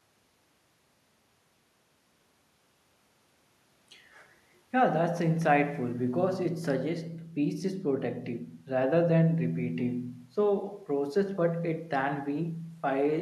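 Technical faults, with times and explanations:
No technical faults can be heard in this speech clip.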